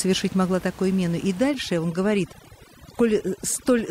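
From 1.49 s to the end of the clip, a noise reduction stage is working far too aggressively, a case of overdone noise removal. It treats any frequency band that sits close to its noise estimate as noise and pulls it down hard or shuts it off, catching the softer parts of the speech as well. The room noise, which sat about 21 dB below the speech, collapses to near silence scattered with twinkling specks.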